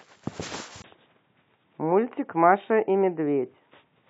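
At 0.82 s the speech drops out for 20 ms, then turns dull and quieter, losing everything above 3.8 kHz. This is likely an input switched to a poorer device, with faint new background noise.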